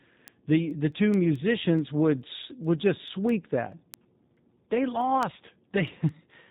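From the start, the speech carries G.729 codec damage throughout, with a synthetic, slightly rough texture that fits an 8 kbit/s G.729A link. Each 10 ms frame is rebuilt from a vocal tract filter, a pitch predictor and a few pulses, and nothing above 3.8 kHz survives. It sounds buzzy and model-made rather than merely muffled, which sets it apart from a plain low-pass filter.

From 0.28 s to 6.31 s, word clock ticks recur about five times a second, roughly 30 in all. The receiving device runs on its own clock, off by something like 100 ppm, so at each slip one sample is dropped or repeated. The clicks are sharp and uneven in strength. Their steady spacing distinguishes them from random dropouts or crackle.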